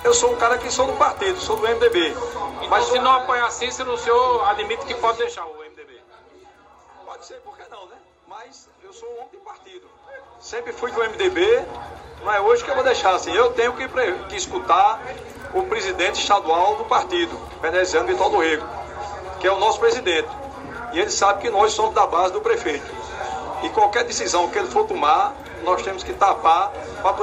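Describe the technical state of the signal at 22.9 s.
At 22.9 s the signal is intact, with no fault to be heard at that moment.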